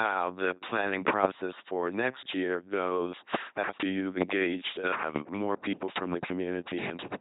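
Speech passed through an LPC-10 vocoder across the whole clip, giving a buzzing, mechanical robot voice with heavy damage and nothing above 3.9 kHz. Unlike other low-rate codecs, each moment is forced fully voiced or unvoiced, so misjudged sounds flip to buzz or hiss. The sound points to a 2.4 kbit/s stream.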